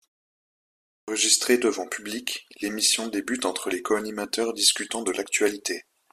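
At 0.90 s, a clipped start after a pause: the output device, idle through 0.9 s of silence, wakes late, swallowing about 178 ms before "devant public l'émission débute" begins abruptly. The waveform jumps straight from flat to speech.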